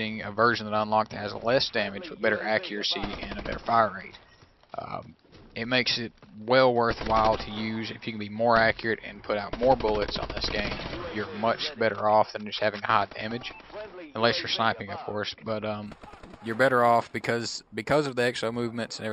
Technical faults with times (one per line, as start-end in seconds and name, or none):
15.86-19.13 imaging from linear upsampling